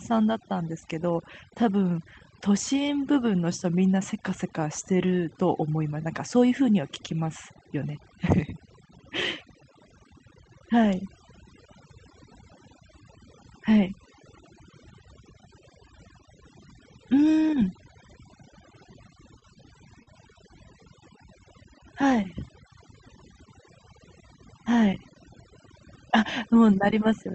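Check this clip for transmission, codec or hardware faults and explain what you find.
Three faults stand out, one across the whole clip and two brief ones close together near the end.

Overdone noise removal: throughout, the background drops and breaks up into twinkling specks, because an overly strong noise reducer shut down bands near its noise estimate.

Short stall from a late packet, 19.39 to 19.45 s: a sound is held about 25 ms too long with a slight buzz or dip, as the receiver stretched the last audio while awaiting a late packet, losing nothing.

Short concealed packet loss, 20.03 to 20.10 s: a brief smear replaces about 40 ms of lost audio, which the receiver bridged with about 36 ms synthesised from the preceding sound before blending back.

The call codec's upper limit near 8 kHz is audible as a softened top end.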